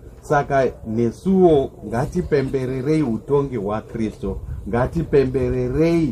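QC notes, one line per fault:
Throughout, MP3 compression: the damage is plainly audible across the whole clip, with a watery, swirling quality where weak frequency components drop in and out from one frame to the next. Sharp onsets sound smeared rather than crisp. The sound fits a likely low-bitrate encode around 64 kbps, where the encoder runs short of bits and discards detail its hearing model treats as expendable.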